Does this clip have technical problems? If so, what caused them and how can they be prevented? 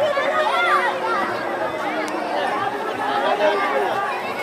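No, nothing stood out as a technical problem on listening to this clip.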